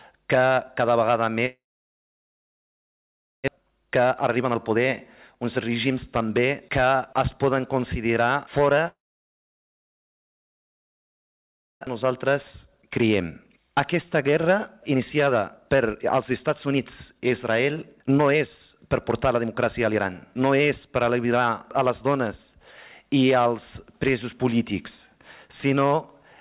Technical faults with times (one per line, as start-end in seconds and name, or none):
1.46-3.50 long network dropout
3.56-4.86 jitter buffer speed-up
5.34-7.45 jitter buffer speed-up
8.88-11.89 long network dropout
12.03-22.39 jitter buffer speed-up